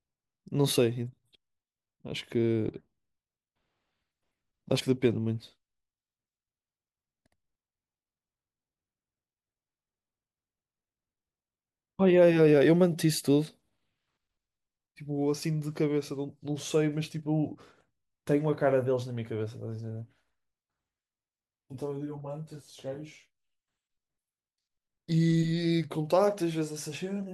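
At 4.79 s and again at 17.53 s the speech jumps forward, by around 50 ms and then about 20 ms, consistent with two and one 24 ms compressed frames skipped.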